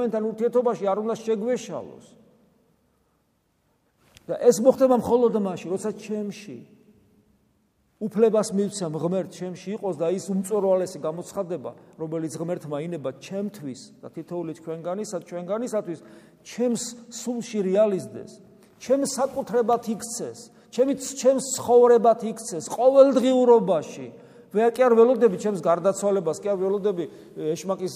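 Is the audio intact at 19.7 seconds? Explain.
No. Sample clock jitter from 18.99 to 20.49 s mistimes samples, adding hiss about 40 dB below the signal that rises on loud, steep waveforms.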